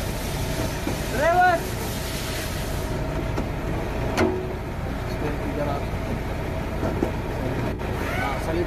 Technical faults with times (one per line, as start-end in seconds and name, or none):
0.84-0.88 corrupt frame concealed
7.72-7.80 corrupt frame concealed